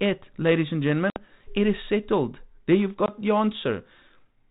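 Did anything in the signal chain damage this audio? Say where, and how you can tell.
Yes, packet loss on an ADPCM call, at the network stage. Hard-edged silences at 1.1–1.18 s (60 ms lost, a few packets) and 3.06–3.11 s (20 ms, one packet) leave the decoder's predictor and step size mismatched, so sound resumes slightly distorted, briefly.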